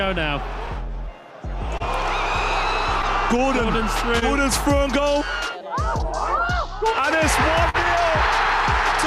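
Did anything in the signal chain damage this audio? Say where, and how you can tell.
Yes. Clock drift between sender and receiver runs through the whole clip. The sender's clock is running about 2 percent slow, so the receiver's jitter buffer keeps draining. The result is small, unevenly spaced timing hiccups rather than a steady pitch or speed shift, which points to the network buffer and not a resampling error.

Scattered short gaps appear at two points in the network stage. The first is between 0.05 and 1.82 s, with about four gaps, none longer than about 20 ms. The second is between 3.02 and 4.24 s, with about four gaps up to about 30 ms. Each hole is patched by continuing the previous sound, giving brief smears and ticks. Nothing actually drops out, which distinguishes this from dropouts caused by a buffer underrun.

Repeated timing corrections run from 0.82 to 7.18 s. The receiver plays at 99 percent speed, stretching short pieces so it doesn't run ahead of the slow sender, and adds roughly 70 ms in total. 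These edits all go the same way. Isolated concealment events would not do that.

A short stall from a late packet occurs at 7.69 to 7.76 s. A packet arrived 44 ms late, the buffer ran empty, and the receiver held the last sound for 44 ms before continuing from the same point. A held sustain with nothing missing marks this as late arrival rather than a lost packet.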